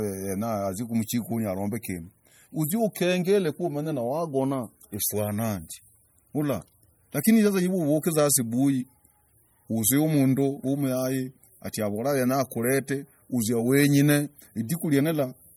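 Throughout, likely MP3 compression starved of bits, fitting about 48 kbps, drops weak frequency lines from frame to frame, leaving the speech plainly watery and swirly.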